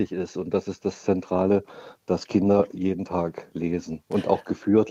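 Nothing in the audio stood out as a technical fault on listening.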